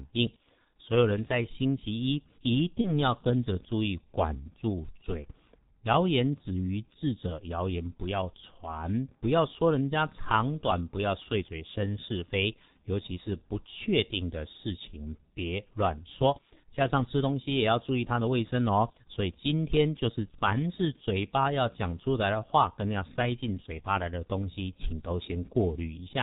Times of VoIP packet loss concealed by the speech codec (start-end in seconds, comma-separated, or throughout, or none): 2.81-2.93